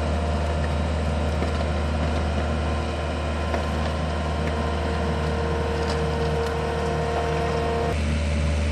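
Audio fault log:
No technical fault can be heard anywhere in the signal, which keeps unbroken continuity across the whole clip.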